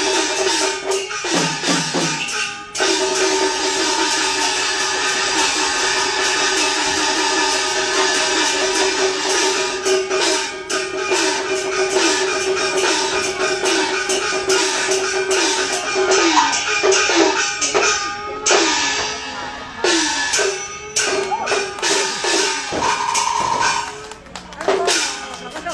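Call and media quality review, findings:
Digital radio blending to analogue, 15.76–19.31 s. Hybrid receiver lost the digital stream and crossfaded over about 280 ms to the station's FM simulcast, then back. Symptoms: level shift of about 3 dB, hiss at roughly 40 dB below programme. Probable component: tuner blend logic under weak digital reception.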